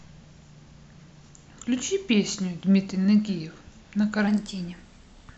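From 4.28 s to the end at 5.37 s, the speech jumps into a wrong sample rate fault. Everything gets about 9% faster and roughly one and a half semitones higher, so the voice sounds a bit chipmunky and rushed. Speed and pitch move up together by the same ratio, the signature of samples played back faster than they were captured with no resampling. It fits 22 kHz material pushed out at 24 kHz.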